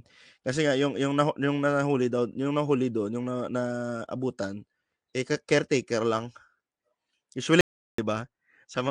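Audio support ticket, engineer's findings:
Audio dropout to silence, 7.61 to 7.98 s, roughly 0.38 s lost. Speech cuts off mid-flow, silent gap, no room tone, then resumes abruptly. Likely input-side loss (loose device, failed link or stray mute) while the recorder kept writing. Missing content isn't recoverable, so patch or re-record that bit.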